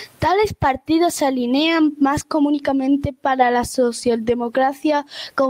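No technical faults are audible anywhere in the speech.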